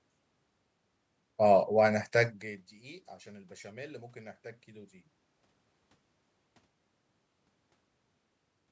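Listening closely to the speech, nothing stood out as a technical fault.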